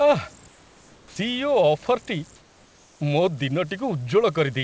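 Converter idle tones run through this whole speech recording as a whistle near 7 kHz, about 26 dB below the signal, from an undithered delta-sigma converter locking into repeating bit patterns. Comfort noise in place of the background appears from 0.48 to 1.16 s and from 2.36 to 3.00 s. The real room background becomes a smooth, featureless hiss, about 5 dB and then about 3 dB quieter, likely because the sender stopped transmitting during the pauses and the receiver filled them with synthetic noise. An onset clipped by the voice detector follows at 1.09 to 1.16 s, where the first 70 ms of returning speech are missing and it begins abruptly, likely because the detector was slow to notice sound had resumed.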